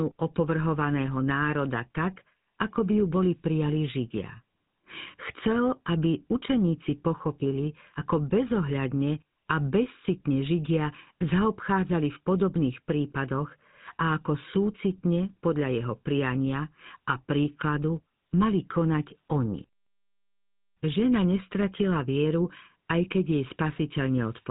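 Throughout the speech, the audio has passed through a GSM full-rate codec, which rebuilds each voice from a vocal-tract model driven by thinned, regularly spaced pulses, consistent with a 13 kbps stream. The result is a plainly buzzy, gravelly roughness, with nothing above about 3.8 kHz.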